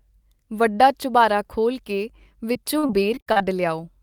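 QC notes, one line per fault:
2.53–3.42 s, repeated packet loss (robotic sound): just after "ਵੱਡਾ ਚੁਬਾਰਾ ਖੋਲ੍ਹ ਕੇ" the speech turns choppy, broken by seven short holes of up to 58 ms. Lost or late packets were patched by extending the preceding sound, filling roughly a quarter of the stretch.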